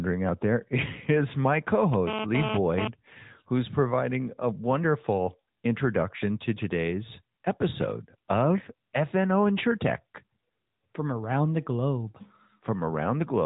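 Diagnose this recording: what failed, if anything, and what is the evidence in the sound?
AMR narrowband mobile codec damage runs through the whole speech clip at the codec stage. Nothing passes above 3.8 kHz, and the voice sounds plainly buzzy and synthetic, which fits a mid-rate mode near 10 kbps. A few pulses per subframe drive a vocal-tract model, and that loses natural texture.

GSM phone buzz appears from 1.94 to 2.88 s, between "is my co" and "who's providing a wonderful", entering through the analogue wiring. A hard, raspy 217 Hz buzz with many harmonics sits about 2 dB below the speech. Nearby radio bursts were rectified by the audio circuit, intermittently as in a data transfer.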